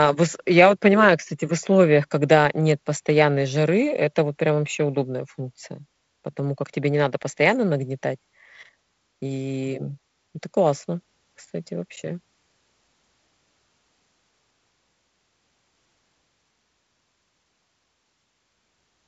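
No technical faults are audible in the speech, which carries the signature of G.722 wideband telephone coding, with content reaching up to about 7.7 kHz and nothing above it, and a slightly roughened lower band that fits the codec's reduced 48 kbit/s mode.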